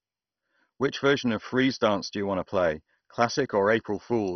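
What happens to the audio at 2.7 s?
At 2.7 s the speech sounds dull and gurgling, with nothing above 6.1 kHz, likely MP2 compression throughout, with upper sub-bands dropped and remaining bands coarsely quantised, consistent with roughly 32 kbps.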